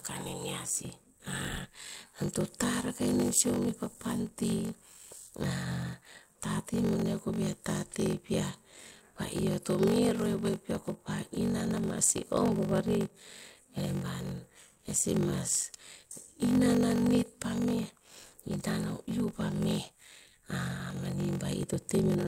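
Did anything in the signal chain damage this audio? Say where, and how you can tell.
Yes. Across the whole clip the speech carries a steady buzz at about 46.9 Hz and plays back slowly, at 0.861 times normal speed, yet its timbre stays. This points to a block size mismatch (padded) at the driver or buffer stage. One stage hands over blocks shorter than the next stage reads, which fits a 1024-sample read block, and the shortfall is filled with zeros. That inserts a brief silence in every block, producing the block-rate buzz and stretching the timing.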